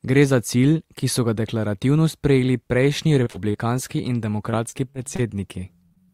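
It's a speech recording, and late on it picks up repeated packet loss with that robotic, choppy quality. Between 3.23 and 3.56 s, and again from 4.50 to 5.20 s, a handful of holes up to about 40 ms each get patched by stretching the previous sound, so pieces drop out. Right at the end come three bits of short concealed packet loss, at 5.86 to 5.92 s, 5.94 to 5.98 s and 6.06 to 6.09 s. Each is a brief gap of a few hundredths of a second that the receiver papered over, heard as a quick smear or wobble.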